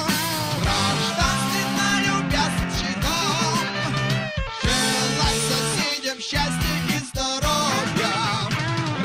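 At 2.63 to 2.65 s the audio lurches forward with no gap, roughly 0.4 s missing: a skip ahead, where a stretch was dropped while later audio was already queued.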